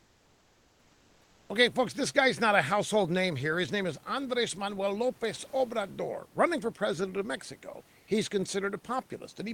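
From 0.00 to 1.49 s, comfort noise replaces the background: the room noise, which otherwise sits about 34 dB below the speech, gives way to a smooth, featureless hiss about 2 dB quieter. The same swap recurs for 80 ms at 7.99 to 8.07 s. The likely cause is discontinuous transmission in a codec such as Opus, where the receiver synthesises noise during pauses. Unlike a noise gate or dropout, the level never falls to silence; only the room's texture disappears.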